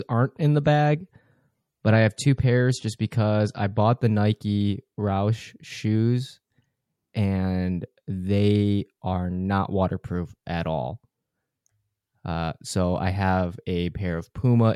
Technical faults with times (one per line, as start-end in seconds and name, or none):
0.00-4.00 adaptive stream starting at a low bitrate